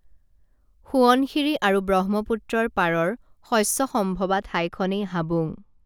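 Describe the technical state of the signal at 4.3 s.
At 4.3 s the speech is affected by de-emphasis applied wrongly, a fault that begins at about 4.14 s and continues to the end of the clip. A treble-cut filter intended to reverse pre-emphasis has acted on material that either never carried that boost or had already been corrected. The response falls smoothly with frequency, reaching about 10 dB down at 10 kHz relative to 1 kHz, so the sound is dull and muffled, with softened consonants and lost air.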